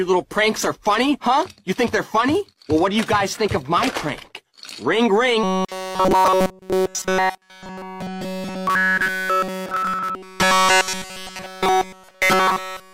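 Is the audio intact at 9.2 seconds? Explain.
No. From 5.43 s onward the sound is a rigid, metallic 188 Hz buzz: robotic sound from repeated short buffers, likely a 5 ms chunk looping instead of fresh audio.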